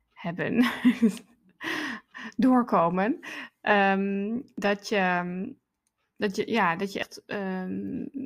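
At 4.58 s and again at 7.03 s the speech jumps abruptly, with a small slice, around 50 ms, gone and the edges butted together. This is likely audio missing between chunks, lost each time the recorder switched to the next 2.5-second block.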